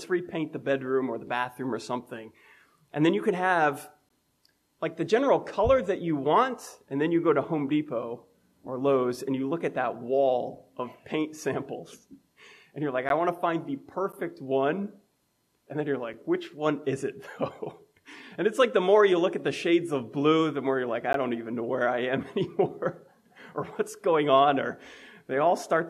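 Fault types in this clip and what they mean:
Gap between stream segments: Timestamps of adjacent one-second segments fail to meet. The player fills the hole with silence. Five hard-edged dropouts, 6 to 15 ms each.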